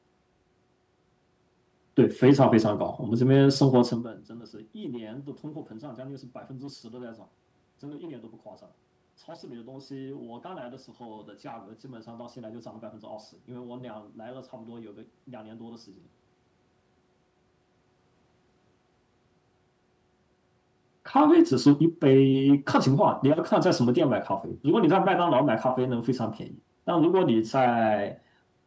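No technical faults can be heard anywhere in this speech recording. The room background drops away in the pauses as the call processing mutes them, the level shifts around 4 s and 20 s come from the talker moving relative to the microphone, and nothing reaches above 8 kHz, all of which is ordinary for this path.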